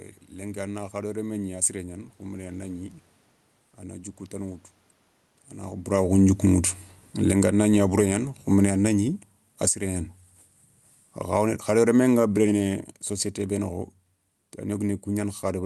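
Automatic gain falling from 5.79 to 9.83 s: shortly after the talker shifts position around 5.5 s, the gain control judges the input too loud and pulls it down by about 17 dB, so voice and room noise sink together. Automatic gain rising from 8.07 to 10.21 s overlaps that drop, with the control reversing and lifting level by about 4 dB in a gradual swell of voice and background. Automatic gain falling returns at 11.2 s and continues to the end, steadily lowering the sound and its background together.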